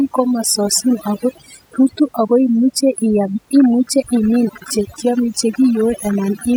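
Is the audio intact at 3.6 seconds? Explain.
No, not at 3.6 seconds. A train of clicks starts right around there, at 3.56 s, and runs to 6.43 s. They come about eight times a second at an uneven pace, around twenty in all, each with much the same sharp shape and peaking a few dB above the speech. You hear a ragged ticking over the talking and in the gaps. The likely cause is interference from nearby equipment or a faulty connection or power supply.

The whole clip, this moment included, also has overdone noise removal. The noise reduction was set so hard that it pulls individual frequency bands down to nearly nothing whenever they sit close to its noise estimate, and the quieter parts of the speech get dragged under too. The background drops and breaks up into little twinkling specks.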